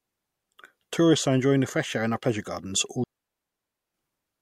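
A digital wireless dropout runs from 3.04 to 3.94 s, right after "our pleasure gardens all". The receiver lost too much of the radio data stream and muted itself with a very quick fade, leaving a clean 0.9 s hole of near silence with no noise burst on either side.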